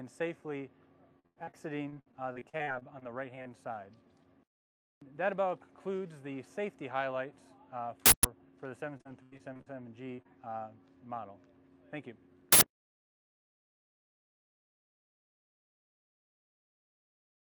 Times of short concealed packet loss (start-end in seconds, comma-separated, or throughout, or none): 10.16-10.27